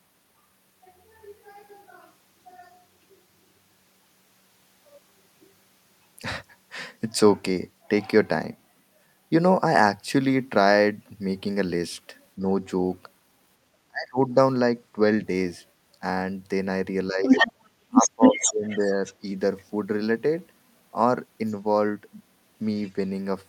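At 12.36 to 12.47 s and 13.88 to 14.36 s the talker's speech is suppressed in double talk. The first dip is slight, and the second falls by around 30 dB, likely because the echo canceller turned the microphone down while both sides spoke at once.

It returns at 17.09 to 17.25 s with a dip of around 10 dB. From 17.25 to 19.64 s the other side's voice leaks through. It is likely loudspeaker echo that the canceller failed to remove, and it sits slightly above the talker's level.

Within that stretch, background gated by the echo canceller cuts the room sound by about 15 dB, from 17.52 to 17.59 s. The gap is brief and the room sound comes back as the canceller releases.

From 17.87 to 19.01 s, double-talk suppression pulls the talker down again by about 20 dB.

Faint scraps of the other side's voice leak through at 21.46 to 21.54 s and 22.85 to 22.92 s, far below the talker.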